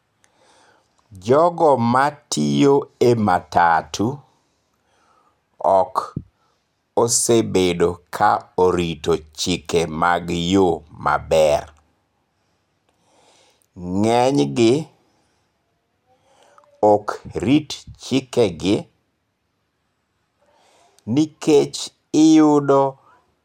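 At 11.59 s a brief burst of DAB burbling occurs in the speech. Weak reception let bit errors, well under one percent, slip past error correction into the MP2 data. Corrupted samples put short blips of noise into single sub-bands, giving a short blip.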